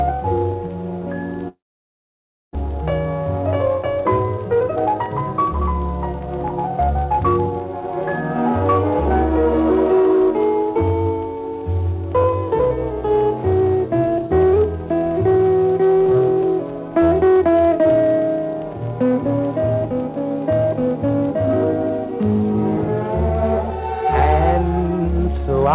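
From 1.48 to 2.57 s the stream stops arriving, most likely a long network dropout in which packets went missing and the delay then jumped by about half a second. The receiver stretches the last sound into a short, fading buzz, and then almost a second of near-silence follows. When the audio resumes, roughly 0.6 s of material has been lost outright, so it picks up further along rather than where it broke off.

Having built up a backlog, the jitter buffer then works it off through a jitter buffer speed-up, repeatedly cutting out slivers one or a few pitch periods long. From 3.67 to 5.47 s the audio runs at about 118% speed, shedding around 0.3 s, and from 6.13 to 6.81 s it runs at about 108%, shedding a few hundredths more. Pitch stays put, but the sound comes across as hurried. Throughout, the call path passes nothing above 4 kHz, consistent with narrowband G.711 mu-law.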